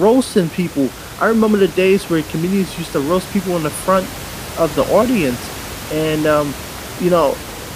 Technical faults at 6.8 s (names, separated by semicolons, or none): none